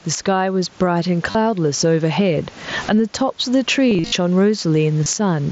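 Gain pumping runs through the whole clip: the level swings by around 15 dB, pulled down under each louder syllable, likely from input gain set far too high with a fast limiter clamping it. On a waveform the envelope looks flattened, with breathing noise floors between peaks.

Concealed Bluetooth headset packet loss appears three times. From 1.31 to 1.35 s about 38 ms of audio is replaced by a repeated copy of the preceding waveform. Between 3.90 and 4.12 s losses scatter across roughly 225 ms, the longest run near 53 ms, giving a buzzy held tone with a warble where real speech resumes. At 5.04 to 5.06 s a brief gap is patched the same way. Spectrograms show smeared, evenly spaced harmonic bands there.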